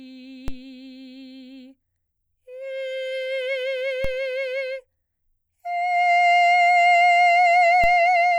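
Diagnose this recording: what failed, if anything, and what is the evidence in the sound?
Three DC steps in this music, at 0.48, 4.05 and 7.84 s, each heard as a low thump. The zero line jumps by about -17 to -16 dBFS and then decays, as through a 5 Hz high-pass. That points to an offset entering at the converter or analogue input stage.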